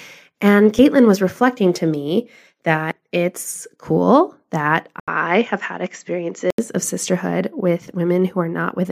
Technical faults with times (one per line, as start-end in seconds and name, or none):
5.00-6.58 input switched to a poorer device